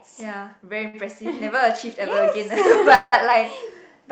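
At 0.87 s a packet arrived late and the jitter buffer ran dry, producing a short stall from a late packet. Instead of skipping ahead, the receiver stretched the last sound for about 61 ms until the packet turned up, then resumed from the same point. Nothing is lost, but one sound lingers unnaturally between 0.87 and 0.95 s with a faint buzz or dip, and everything after it plays roughly 61 ms later than it should.

From 2.95 to 3.14 s there is a longer call audio freeze, likely caused by packets held up in transit long enough to empty the jitter buffer. The receiver carried the last sound forward as a fading buzz or hiss for about 174 ms, and the final 20 ms or so of that stretch falls to silence before the audio picks up exactly where it stopped. The result is an inserted gap with no audio missing. Through the Opus call path, the high end tops out around 8 kHz.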